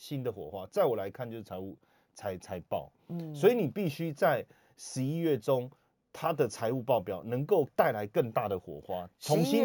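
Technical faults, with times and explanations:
Throughout, imaging from sample-and-hold upsampling: each sample was simply repeated, so mirrored speech fizzes metallically at 8 to 16 kHz, about 23 dB down.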